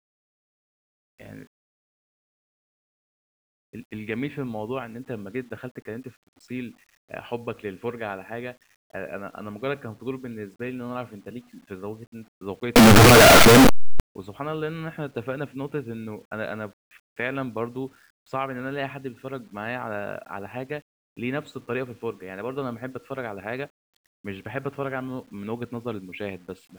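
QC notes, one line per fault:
12.76–14.00 s, signed and unsigned mixed up: about 1.2 s of very loud, harsh distortion in which quiet moments are as loud as the rest, likely from the top bit of each 8-bit sample flipping so zero crossings jump full range. The waveform swings across its whole range, and the spectrogram shows solid broadband smear.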